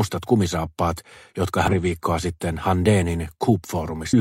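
A brief glitch interrupts the sound from 1.68 to 1.73 s, and another from 4.09 to 4.14 s. Both are damaged data in a compressed stream: corrupted bytes make the decoder misread frames, lose sync and hunt for the next frame header.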